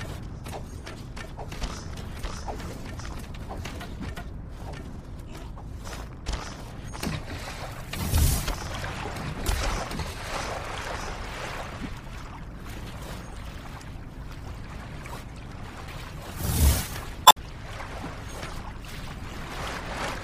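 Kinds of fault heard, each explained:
Damaged data in a compressed stream: part of the encoded data reaching the decoder is wrong, so it misreads the frames there, loses sync and has to hunt for the next valid frame header before output resumes. Here it shows twice near the end, as a short blip at 15.85 to 15.89 s and a longer disturbance from 17.23 to 17.38 s, each an abrupt break in the flow.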